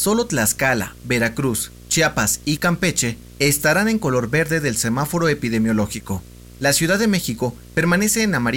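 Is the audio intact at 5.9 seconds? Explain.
No, not really. At 5.9 seconds, like everywhere else in this speech clip, there's video or display buzz. A screen or video cable is leaking into the audio path, leaving a 60 Hz buzz with hash above it, sitting roughly 20 dB under the speech.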